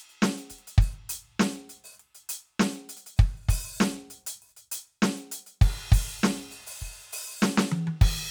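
No technical faults can be heard anywhere in the music, and the signal stays continuous and intact throughout.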